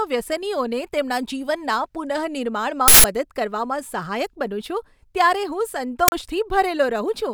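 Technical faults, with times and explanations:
2.88 to 3.04 s and 6.08 to 6.12 s, uninitialised buffer: the speech is abruptly replaced by a loud, harsh burst of digital noise, about 160 ms long the first time and 40 ms the second. Both blocks were sent to the output before any audio had been written into them, so whatever happened to be sitting in that memory got played as if it were samples.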